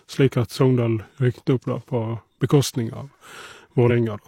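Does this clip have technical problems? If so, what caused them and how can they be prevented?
Yes. There are compressed frames skipped at 1.72 s, between "rykket opp" and "på bekostning", losing about one frame (roughly 50 ms), and at 3.86 s, losing about two frames (roughly 100 ms). The speech jumps ahead at each point, by whole 46.4 ms frames. To prevent it, check file integrity after transfer and use error-resilient streaming so damaged frames are resent rather than dropped.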